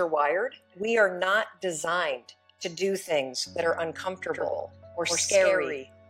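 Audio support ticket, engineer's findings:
Doubled audio track from 4.33 s to end. Whole sound repeats about a tenth of a second late, roughly 5 dB down, abrupt onset, no decay. Likely cause: a second, slower capture path or an out-of-step edit copy. Waveform shows each transient followed by a smaller identical twin. Spectrogram shows full-band ghost features at a fixed lag, without smearing.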